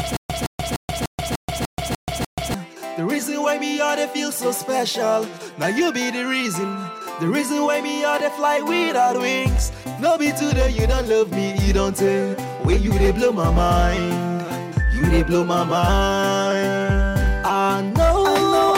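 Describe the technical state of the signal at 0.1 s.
At 0.1 s the playback has likely stalled, with each retry replaying the last fragment before running dry. The result is a stutter with silent gaps, already under way when the clip opens and lasting until 2.54 s. A 166 ms burst repeats eight times at an even 297 ms period, each followed by about 131 ms of dead digital silence. Whatever audio belonged in that span is missing, replaced by the same repeated fragment.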